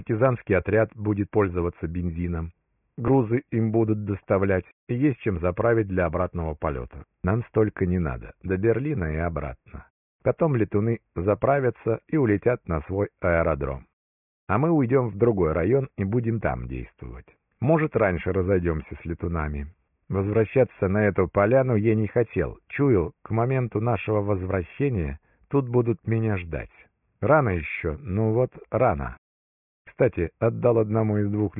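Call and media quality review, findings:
No faults found in playback.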